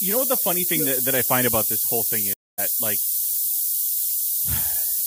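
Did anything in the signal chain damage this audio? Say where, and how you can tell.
Yes. At the sample-format conversion stage, a steady thin hiss rising toward the treble runs throughout. That's low bit depth with noise shaping: 3 bits, with the rounding noise pushed upward and sitting only about 10 dB under the speech.

On the network side, right after "about this whole thing", a stream reconnect drops about a quarter-second of silence from 2.33 to 2.60 s. The speech then picks up a bit further on, skipping some material.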